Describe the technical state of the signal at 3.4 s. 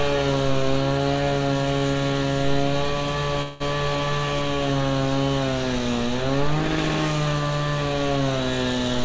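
From 3.42 to 3.62 s there's a call audio freeze: the sound smears into a fading buzz, likely from an emptied jitter buffer, then resumes with nothing lost.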